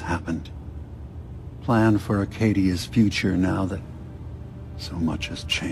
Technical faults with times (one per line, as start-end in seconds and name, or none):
3.55-4.09 drift correction step